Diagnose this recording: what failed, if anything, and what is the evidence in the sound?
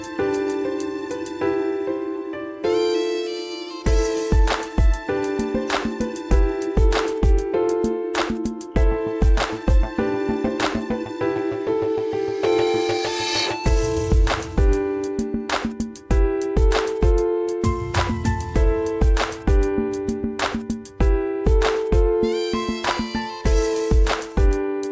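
Nothing has failed here; the audio simply comes through a call path, and the way everything stops at 8 kHz fits a wideband call codec such as G.722 at 64 kbps, which is expected behaviour rather than a fault.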